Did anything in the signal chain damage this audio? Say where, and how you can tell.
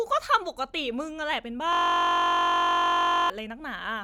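Yes. Between 1.73 and 3.30 s the speech freezes into a system hang loop, which puts the damage at the driver or buffer stage. A 21.33 ms chunk repeats exactly, over and over, producing a steady buzz at about 46.9 Hz instead of a stutter. That loop length fits a 1024-sample ring buffer. The host or driver stalled and stopped refilling it while the hardware kept replaying the same buffer until things recovered.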